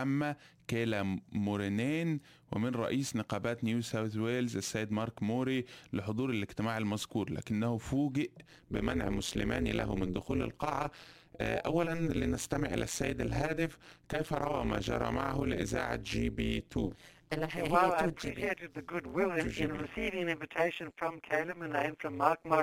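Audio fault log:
8.46 s to 22.63 s, overlap-add ripple: the sound turns into a harsh, metallic, robotic buzz that pulses around 150 times a second and swings by about 60 dB. The sound was split into windowed frames and rejoined with overlaps that don't add to a steady gain, so the level drops once per frame.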